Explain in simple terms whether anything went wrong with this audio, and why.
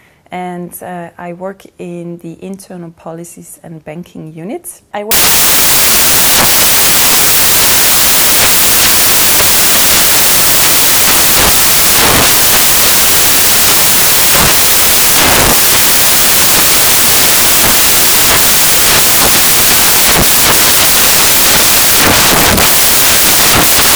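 At 5.11 s the audio suddenly turns into loud, harsh hiss-like noise, and it stays that way until the end of the clip. This is samples built from the wrong bytes. Each sound sample is stored as a few bytes, and here they were put back together incorrectly: shifted by one byte, in the wrong order, or lined up differently. The tiny, rapidly changing details end up treated as the main part of the sound, which comes out as noise.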